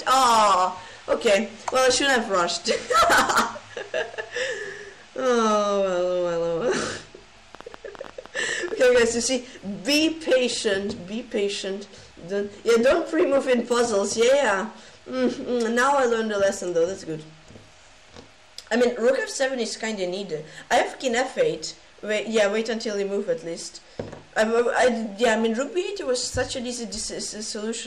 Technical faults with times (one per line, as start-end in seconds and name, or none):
7.55-8.96 train of clicks